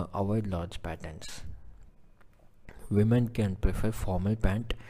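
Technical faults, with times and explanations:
Throughout: sample clock jitter. The converter's clock wavers by a few microseconds, so each sample lands slightly off time, producing a roughness about 40 dB below the signal that swells on steep, loud, bright passages and disappears in silence. A spectrogram shows a faint broadband haze tracking loud moments.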